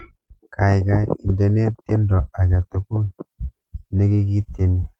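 No technical faults are audible.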